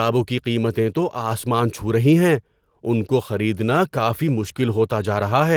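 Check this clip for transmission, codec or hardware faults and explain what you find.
No faults detected here.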